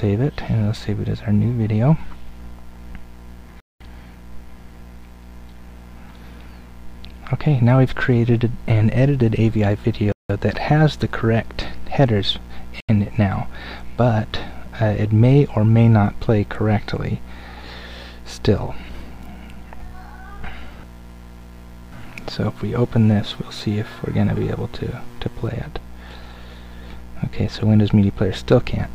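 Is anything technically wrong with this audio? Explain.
Yes, there are two kinds of fault: three short dropouts and one skip.

The dropouts at 3.60 s, 10.12 s and 12.80 s are a likely Bluetooth stall. Radio interference held back packets, so the headphones' buffer emptied and playback halted until the resent data arrived. Each time the audio cuts to complete silence, lasting 0.20 s, 0.17 s and 0.08 s respectively, and then resumes where it left off.

At 19.80 s there is a skip, likely a dropped buffer (overrun). The software failed to read its samples before the hardware wrote over them, so a stretch of audio around 30 ms long is lost, and the material either side is butted together with no gap. What you hear is a sudden jump forward in the sound.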